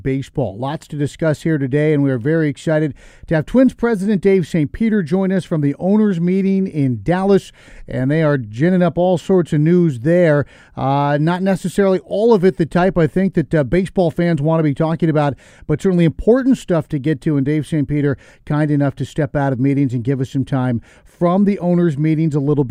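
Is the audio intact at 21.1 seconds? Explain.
Yes, at 21.1 seconds the speech runs intact, with no dropout, click, distortion or other audible fault at that moment.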